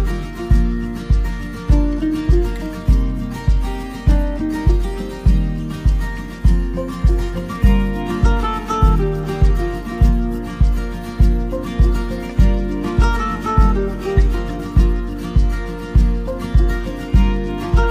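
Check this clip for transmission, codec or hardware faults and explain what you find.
Nothing in the clip gives me anything to flag, so there's no fault to report here.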